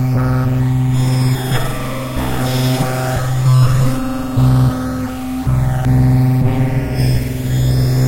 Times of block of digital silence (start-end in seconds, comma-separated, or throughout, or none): none